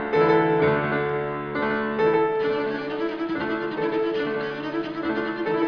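No technical faults can be heard anywhere in this audio; the signal holds steady and continuous throughout.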